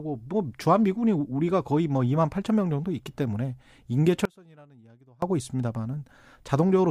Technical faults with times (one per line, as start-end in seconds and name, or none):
4.25-5.22 audio dropout to a faint residue